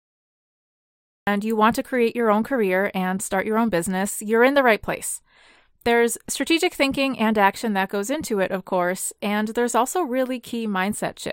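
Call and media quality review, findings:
Cut-off start, 0 to 1.27 s: digital silence, then speech begins mid-sound at 1.27 s, no attack or fade. Capture or stream started late. Waveform: flat line, then abrupt full-amplitude onset; spectrogram: sharp vertical edge.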